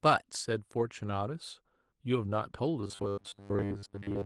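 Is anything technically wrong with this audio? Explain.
Yes, there are three faults, all in the last part of the speech.

From 2.81 s to the end of the clip, a robotic sound from repeated short buffers turns the speech into a rigid metallic buzz at 100 Hz. The likely cause is 10 ms buffers being replayed while most of the real audio in that stretch is skipped.

From 3.11 to 3.19 s, a burst of packet loss removes about 60 ms of audio. The receiver extends the last sound and fades it before the speech resumes.

From 3.19 to 3.22 s, short concealed packet loss drops about 20 ms. The gap is filled by continuing the preceding sound, leaving a brief smear just after the longer dropout.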